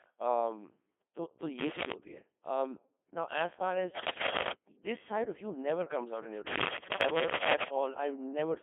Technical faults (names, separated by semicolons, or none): Codec 2 vocoder; cable scratch noise